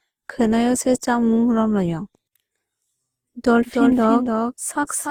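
Generation loss runs through the whole speech clip: the sound is swirly, smeared and hollow, with blurred attacks, most likely from being decoded and re-encoded about four times with Opus at around 48 kbit/s, each pass adding fresh quantisation noise and spectral holes. A doubled audio track starts abruptly at 3.65 s and lasts to the end. A dry, full-band second copy of the speech trails roughly 300 ms behind and sits about 5 dB quieter, with no room decay, likely from a second capture path or a misaligned edit.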